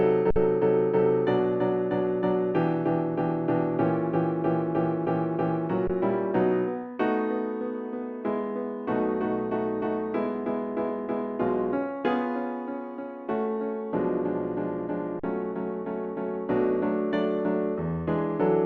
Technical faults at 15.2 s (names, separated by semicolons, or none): underrun with held sample